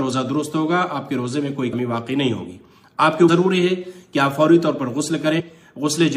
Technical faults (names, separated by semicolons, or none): compressed frames skipped